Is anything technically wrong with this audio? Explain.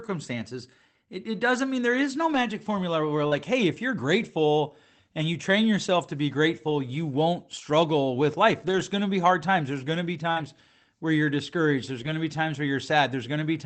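Yes. Lost packets on the call path were rebuilt from error correction six times: at 2.33 s, at 3.31 s (between "formula where we're" and "hey if you're grateful"), at 5.21 s (just before "you train yourself to"), at 8.67 s (after "won't struggle with life"), at 10.36 s and at 11.98 s. Each missing packet was recovered from a low-bitrate copy carried in the next one. The rebuilt stretches, 20 to 80 ms long, sound rougher and grainier, but there is no gap.

Short concealed packet loss also occurs at 3.27 s and at 10.31 s. About 40 ms never arrived in time at either point, so the decoder extended the preceding sound and then blended back into the real audio. Each of these is heard as a brief smear or wobble. In both places, an error-correction rebuild overlaps the end of the concealed stretch.

All of this is on an Opus path whose sound points to roughly 24 kbps coding with content limited to about 8 kHz.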